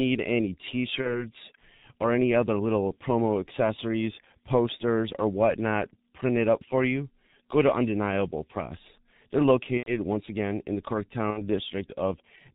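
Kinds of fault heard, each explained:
G.723.1 codec: Throughout, the speech sounds muffled and hoarse, with nothing above 4 kHz and blurred consonants. This fits heavy coding at around 6 kbit/s, where coarse 30 ms frames and a slowly updated voice model cannot follow rapid changes.
VoIP packet loss concealed by the speech codec: At 1.02, 9.77 and 11.30 s, the speech stretches into a buzzy tone or coloured noise that fades, and stays weak or distorted for tens of milliseconds or more afterwards. The decoder filled gaps of roughly 30 to 90 ms by extending its last pitch and filter at falling gain.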